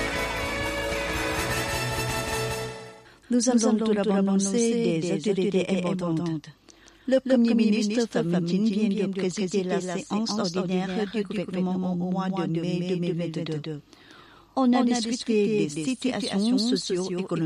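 A doubled audio track runs through the whole clip: every sound is followed by a second, full-band copy arriving roughly a fifth of a second later, about 5 dB quieter. Unlike an acoustic echo or reverb, the copy never decays or repeats and carries no room colouring. It is simply the same signal again at a fixed offset. The likely cause is the audio being captured twice, once through a slower path, or an edit leaving two copies out of step.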